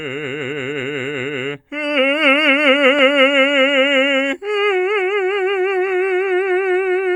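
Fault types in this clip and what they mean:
Nothing to flag in this bit of music, as there isn't a single technical fault to be heard anywhere in it.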